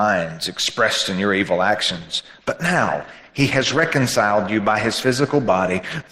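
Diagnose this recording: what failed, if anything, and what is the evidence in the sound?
The adaptive stream dropped to a lower bitrate at the network and codec stage. At 1.9 s the quality falls abruptly, with no gap, and stays down to the end at 6.1 s. Codec artefacts rise. This points to a step from about 64 to 16 kbit/s.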